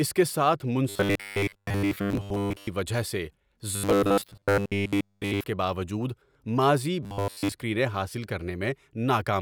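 Fresh audio is likely arriving too seldom, so the playback side keeps looping a short stretch of about 10 ms, producing robotic sound from repeated short buffers. That fixed loop imposes a rigid 100 Hz metallic buzz. It runs from 0.89 to 2.68 s, between "اس کے ساتھ" and "وجہ سے", and from 3.76 to 5.44 s, ending before "کے باوجود", with most of the sound replaced. From 7.03 to 7.52 s the buzz replaces the sound entirely.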